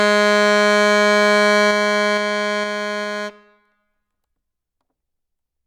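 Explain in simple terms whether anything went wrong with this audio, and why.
Something went wrong when the volume of this music was turned down. Between 1.48 and 3.04 s the system lowered the level in a few coarse jumps, about two a second, instead of gliding down smoothly, and the overall drop is fairly large. Each sudden jump leaves a small click in the music, so during that stretch you hear a ticking riding on the sound. This is called zipper noise.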